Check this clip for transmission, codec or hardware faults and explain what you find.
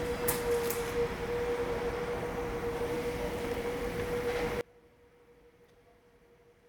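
An audio dropout to a faint residue begins at 4.61 s and runs to the end of the clip. The signal cuts off abruptly rather than fading, leaving only a faint leak of the sound, roughly 25 dB below its earlier level. The likely cause is a break in the wanted signal while the path after the break stayed live, so the leakage passes through instead of true silence.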